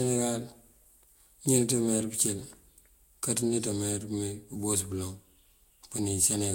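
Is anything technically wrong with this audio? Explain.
Yes. Throughout the speech there is generation loss, most likely from the audio going through lossy Vorbis coding about three times in a row. Each re-encode quantises again on a shifted frame grid, so errors stack: the sound is swirly and hollow, consonant attacks are smeared, and nothing remains above 16.6 kHz. A single encode at the low-60 kbit/s range this points to would sound cleaner, so the compounded smearing is what separates it from one low-bitrate pass.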